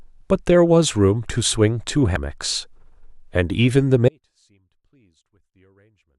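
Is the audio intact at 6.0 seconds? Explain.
No. At 6.0 seconds the speech is inside an audio dropout to a faint residue running from 4.09 s to the end. The wanted signal was likely lost upstream while the path stayed live, leaving only a faint leak around 40 dB down. The waveform collapses abruptly to a thin trace, and the spectrogram turns nearly empty.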